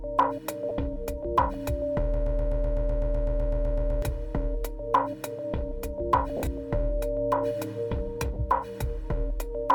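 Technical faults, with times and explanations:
0.69–0.71 s, 6.37–6.47 s and 8.34–8.36 s, lost LE Audio frames: brief noisy smears replace tonal detail. Bluetooth LE Audio frames went missing, about 20 ms at the first and last points and 50 ms scattered over 100 ms at the middle one. The LC3 decoder refilled each gap by reusing the last spectrum with randomised signs.
2.14–4.02 s, broken-record loop: a 126 ms fragment repeats exactly, back to back, 15 times, and the sound that should have played in that span never arrives. The likely cause is a stalled player, encoder or stream that kept resending its last held fragment.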